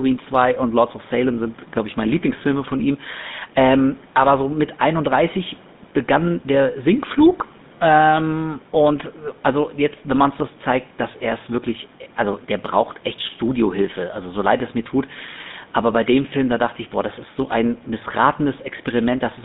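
From start to finish the speech carries GSM full-rate codec damage. The vocal tract is modelled and driven by sparse, regular pulses, so voices turn buzzy and gravelly. Everything sits in a narrow 150 Hz to 3.7 kHz band, which fits a 13 kbps phone link. The faint room noise, about 26 dB below the speech, passes through it too.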